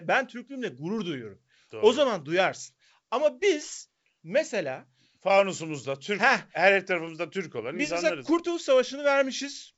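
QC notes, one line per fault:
The speech arrives intact through G.722 wideband coding at 64 kbit/s, which keeps the band up to about 7 kHz, and nothing in the signal needs flagging.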